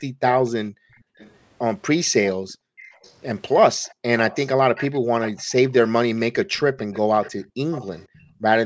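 Right from 0.03 to 1.18 s, the room background gets gated by the echo canceller, dropping by about 40 dB in patches while the far end plays. It happens again from 2.35 to 2.77 s and briefly at 7.47 s. Overlapping that, you hear a faint delayed copy of the speech, roughly half a second behind, from 0.47 to 1.31 s, then louder from 2.23 to 3.14 s, 3.83 to 5.5 s and 6.17 to 8.39 s. That's likely an echo leak, where the far side's canceller let its loudspeaker pickup slip back down the line.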